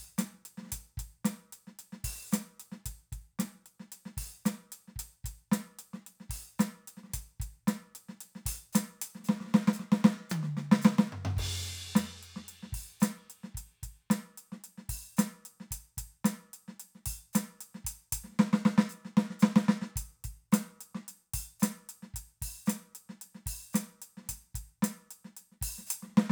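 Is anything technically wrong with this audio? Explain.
Yes. From 0 to 11.7 s the music shows crude rate conversion. Samples seem dropped or repeated without filtering, fitting 48 kHz to 44.1 kHz. This adds a fairly strong gritty, inharmonic fizz.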